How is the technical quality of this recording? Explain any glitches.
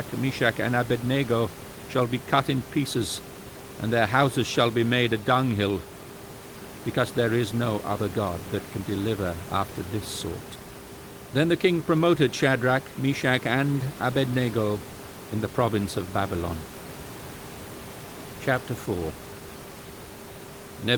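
No glitches turn up anywhere in the recording, and the only thing in the background is the ordinary room noise, sitting about 14 dB below the speech.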